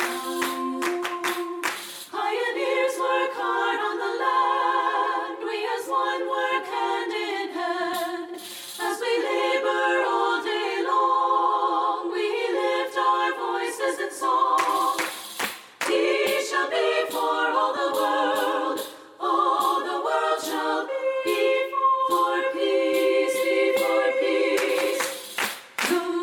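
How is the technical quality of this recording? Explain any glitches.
One short glitch stands out against the light, mild coding of a perceptual codec. At 17.76 s, one lost LE Audio frame leaves a 7.5 ms gap. The LC3 decoder fills it by repeating the previous spectrum with random signs. The sound briefly turns into a noisy smear.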